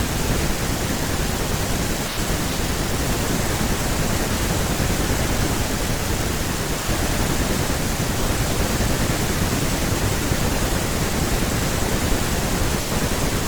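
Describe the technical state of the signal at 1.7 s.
The speech signal at 1.7 s is intact, with no dropout, distortion, glitch or other fault at that moment.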